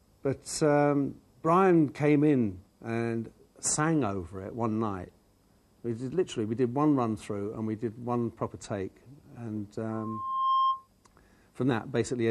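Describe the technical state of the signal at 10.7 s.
At 10.7 s a loudspeaker feedback squeal is sounding, running from 9.91 to 10.88 s. The microphone-to-speaker loop exceeds unity gain at 1.1 kHz, so the tone swells over roughly 0.7 s to several dB above the sound. A spectrogram shows a brightening horizontal line at 1.1 kHz, and the waveform shows a swelling envelope.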